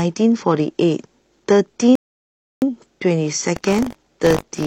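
At 1.95 s the speech just drops to silence and picks up again at 2.62 s, exactly where it left off. That's a rebuffering stall: the player ran dry of downloaded audio and simply waited for more to arrive before carrying on. Nothing gets skipped, so you don't lose any of the speech, but the gap stretches the timeline by about 0.67 s. It's a clean pause rather than a glitch.

From 3.55 s to the end there's a buzzy, robotic rattle riding on the speech at 50 Hz, which points to a buffer period of around 20 ms. That's buffer tearing. The code filling the ring buffer and the hardware reading it have drifted so they cross partway through each period. So a small slice of every buffer, a few percent, is stale audio from roughly 40 ms earlier, butted up against fresh audio with hard edges on both sides. It only rattles while there's signal.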